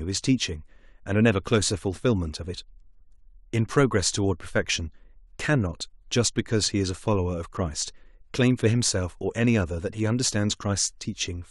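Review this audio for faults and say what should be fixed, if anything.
No faults turn up anywhere in this speech recording. Nothing here needs fixing.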